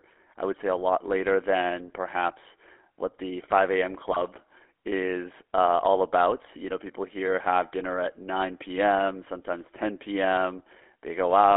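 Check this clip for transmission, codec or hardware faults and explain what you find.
Two faults are present: codec coloration throughout, and a short burst of corrupted frames.

GSM full-rate codec, throughout: the speech sounds buzzy and gravelly and is band-limited to about 300 Hz to 3.5 kHz. This fits 13 kbit/s pulse-excited vocal-tract coding.

GSM bit errors, 4.11 to 4.25 s: flipped bits corrupt the decoder's filter, pitch and gain parameters over a few frames, producing brief squawking, popping distortion.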